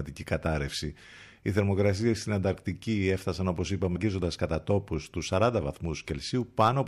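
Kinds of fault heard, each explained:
Clock drift buffer slips: A short click recurs at a steady interval of 2.23 s, beginning near 1.48 s and continuing to about 6.13 s, roughly four times in all. The regularity most likely comes from two devices running on separate clocks, differing by something like 70 parts per million. The buffer between them gradually fills or drains until a small block of a few samples, around seven, is dropped or repeated, producing each click.
Stream segment skipped: At 3.95 s the speech jumps abruptly forward with a brief blip, and a stretch of the programme is missing. This is likely a segmented stream in which one segment failed to load, so the player continued with the following segment. The discontinuity is heard as a sudden cut into later material rather than a gap of silence.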